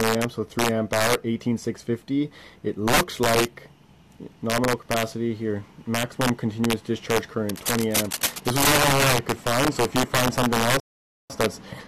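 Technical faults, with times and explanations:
Throughout: integer overflow. The loudest peaks, roughly 2% of samples, are pushed about 10 dB past full scale and wrap to the opposite sign rather than being limited, so each one swings across the whole range and produces a violent crack far harsher than ordinary clipping.
7.49–8.70 s: cable scratch noise. Dense, irregular bursts of scratching and rustling sit over the sound at roughly 5 dB below it. This is likely a worn cable, connector or control being moved, its contact resistance fluctuating rapidly as it shifts.
10.80–11.30 s: rebuffering stall. The audio drops to silence for 0.5 s and then resumes exactly where it stopped. The player ran out of downloaded data and waited for more, so no material is lost but half a second is inserted.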